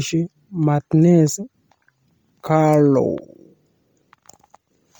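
Across the whole recording the speech carries a breathy, grainy edge, with the upper frequencies sounding hissy and smeared rather than crisp, and nothing reaching above 20.3 kHz. This is heavy Bluetooth LC3 compression damage, likely from the LE Audio codec running at a low rate, which fits about 32 kbps in 10 ms frames. It discards much of the upper spectrum and patches those gaps with shaped noise, so detail turns to fizz.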